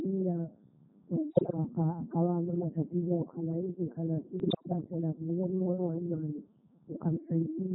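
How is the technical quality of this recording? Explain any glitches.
Pretty rough, honestly. The whole speech clip goes through the Codec 2 vocoder, and the buzzy, robotic character suggests its 3.2 kbit/s mode. Only pitch, voicing, energy and spectral envelope survive, so the voice is rebuilt from sine waves and sounds heavily synthetic.

There are bit errors on digital voice radio at 1.30 to 1.57 s and again at 4.40 to 4.73 s, between "akawa namatatizo nkhala iki" and "anasinde nimeoa nemanye". Flipped bits, something like several percent of them, corrupt the vocoder's frame parameters, so the voice lurches in pitch and level and breaks into warbling, bleepy gibberish.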